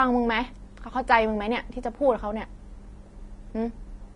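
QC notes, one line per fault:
Throughout, Vorbis compression: the speech sounds hissy and grainy, with nothing above 10.5 kHz and plainly audible roughness. The likely cause is low-rate Vorbis encoding, fitting roughly 31 kbps, where the treble residue is quantised so coarsely that fine detail turns into noise.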